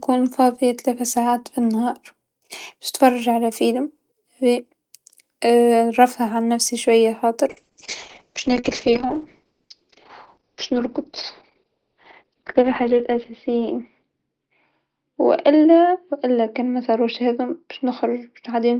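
From 7.49 s to the end of the speech recording, the sound turns rough, watery and muffled, with the top end gone and no recovery before the clip stops. This is a call bitrate drop: the bandwidth estimate fell, so the encoder was given far fewer bits and quantised more coarsely. Audible bandwidth narrows from about 20 kHz to 6 kHz, and the degradation fits a fall from roughly 32 kbps to about 7 kbps, bottoming out for around 5.5 s.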